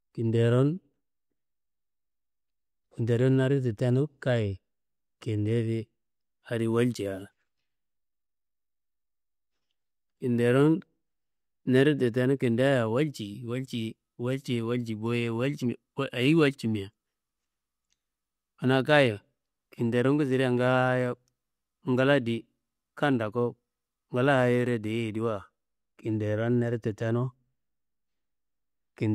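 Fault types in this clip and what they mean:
No faults detected in this speech recording; nothing to list.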